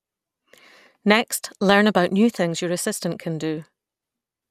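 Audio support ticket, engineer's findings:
Weak DAB reception, bit errors slipping past error correction into MP2 audio data; low error rate, a fraction of a percent. DAB burbling, 3.63 to 3.65 s, short burst across the speech. Corrupt samples put noise blips in single sub-bands and corrupt scale factors make sub-bands jump in level for up to a frame, heard as burbling. Damage points to 26 frames hit. Probable component: weak DAB reception.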